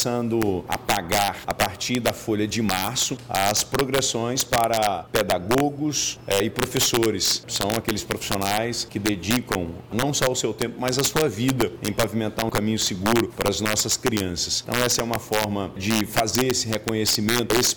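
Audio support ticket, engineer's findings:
Integer overflow throughout: violent cracks on loud peaks, sharper than clipping. Gain stage overdriven about 6 dB, wrapping instead of saturating; maybe half a percent of samples flip sign.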